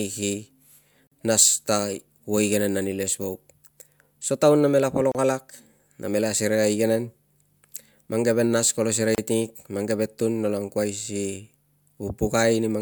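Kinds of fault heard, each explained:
Gap at a join of encoded pieces: The speech was encoded in separate chunks and then butted together without trimming, so each chunk's start-up delay and end padding survive as dead air. You hear a short hole in the speech every 4 seconds, at 1.07 s (about 45 ms), at 5.12 s just after "taun namela" (32 ms), and at 9.15 s (32 ms). Each has smeared edges, and the speech resumes where it left off.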